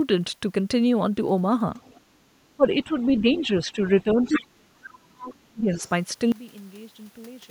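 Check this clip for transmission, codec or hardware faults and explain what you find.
Three things stand out in this speech clip, all pointing to a speakerphone-style echo path and a gain stage.

The other side's voice is leaking through at 1.81–2.01 s, 2.99–3.42 s, 4.21–4.41 s, 4.89–4.93 s, 5.24–5.32 s and 5.73–5.91 s. These are short scraps of a second talker, some barely audible and the ones around 3 s and 4.2 s fairly prominent. Likely cause: the far end playing on a loudspeaker, with the echo canceller not fully scrubbing it from the mic.

There's also speech suppressed in double talk, mildly at 2.57–2.92 s, then heavily from 3.21 to 5.83 s, where the main voice sinks deep and drops out in pieces for roughly two seconds, right while those echo scraps are around. What's likely happening is that the canceller can't tell the near talker from the loudspeaker echo when both are active, so it just turns everything down.

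Finally, a sudden gain jump at 6.32 s drops the level by about 20 dB in one step and holds there to the end, speech and background noise falling together. That points to a digital gain change applied instantly rather than ramped, likely a setting or bit-shift switch.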